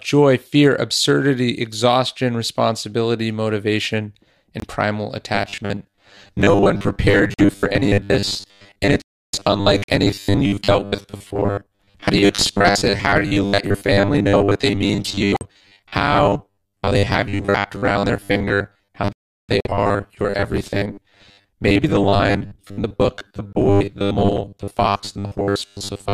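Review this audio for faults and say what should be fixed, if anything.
Abrupt silent gaps cut the speech at 4.60–4.64, 7.34–7.40, 9.84–9.90, 15.35–15.43, 19.60–19.67 and 23.50–23.56 s, each spanning a few codec frames. These are corrupt frames muted: the decoder rejected damaged frames, and the player substituted silence. Protect the stream with error checking and use packet-loss concealment instead of muting.

From 5.35 s to the end, the speech becomes a rigid, metallic buzz at 100 Hz. This robotic sound from repeated short buffers likely comes from a 10 ms chunk being looped to fill late data, with about half the audio replaced. Deliver audio on time with adequate buffering so the software never has to repeat chunks.

The sound stops dead at 9.02–9.33 s (315 ms) and 19.13–19.49 s (363 ms), then resumes. These are playback stalls, likely from the player running out of data or a blocked audio thread. 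Keep the audio thread unblocked and its buffer filled ahead of playback.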